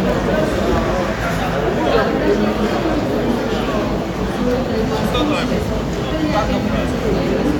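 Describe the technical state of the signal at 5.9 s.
At 5.9 s the audio is intact, with no dropout, distortion, glitch or other technical fault.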